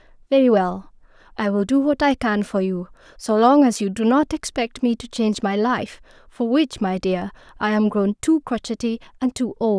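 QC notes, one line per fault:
Nothing stood out on listening to this speech recording.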